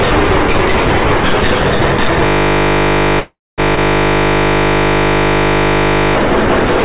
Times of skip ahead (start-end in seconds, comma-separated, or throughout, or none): 3.76-3.79